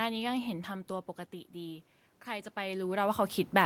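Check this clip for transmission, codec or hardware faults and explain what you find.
One fault is present, in the gain stage rather than the codec or the link. From 0.87 s to the end of the clip at 3.66 s, automatic gain rising can be heard. The input level dropped by about 12 dB. The gain control judged the signal too quiet and pushed its gain up slowly to make up for it. Voice and room noise swell together over more than a second. The talker's own level shifts near half a second and again around two and a half seconds are not faults.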